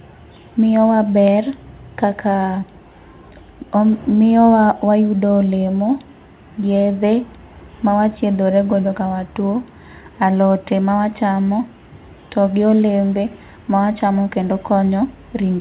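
No technical faults are audible.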